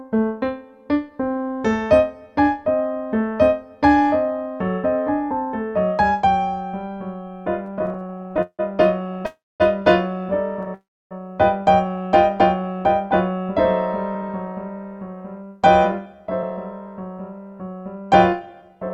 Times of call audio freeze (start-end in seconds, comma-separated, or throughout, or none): 9.26-9.62, 10.74-11.13